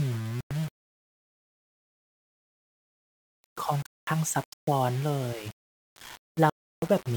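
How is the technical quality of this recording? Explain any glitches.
The recording has poor technical quality. There is constant graininess throughout, and the speech drops out three times.

Low bit depth without dither runs the whole length. The likely cause is that the audio was quantised to very few levels with plain rounding and no dither, which fits a 6-bit signal. Because the rounding error tracks the waveform, it sounds like a rough, gritty distortion that rises and falls with the speech. It sits only about 20 dB below the speech, so it is clearly audible, and it is harshest on softer syllables and decaying sounds.

A Bluetooth stall occurs at 0.41–0.51 s, 3.86–4.07 s and 6.50–6.82 s. These are likely caused by wireless interference holding back packets until the headphone buffer emptied. Playback then froze until the delayed data arrived. Each stall is heard as an abrupt cut to silence lasting 100 ms, 210 ms and about 330 ms, growing longer each time, before the speech resumes.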